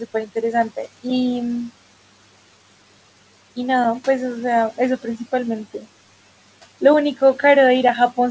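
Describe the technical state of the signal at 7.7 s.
At 7.7 s you're hearing noise suppressor artifacts, which run through the whole clip. The suppressor pulls the room noise down about 17 dB between phrases and lets it back under the speech, all within the call's 8 kHz band.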